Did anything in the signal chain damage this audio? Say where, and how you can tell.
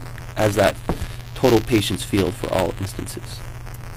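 Yes, buffer tearing at the driver/buffer stage: a steady 172 Hz rattle under the whole clip, which fits a 256-sample buffer, each splicing in a sliver of audio about 10 ms old.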